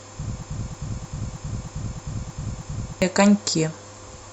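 From 0.43 s to 3.02 s the speech falls into a broken-record loop: one fragment about 313 ms long plays eight times back to back, identical each time, and the audio that belonged in that span never arrives. A stalled player or stream that kept resending its last buffer is the likely cause. On a waveform the same shape tiles across the region, and on a spectrogram the same patch repeats at a regular 313 ms spacing.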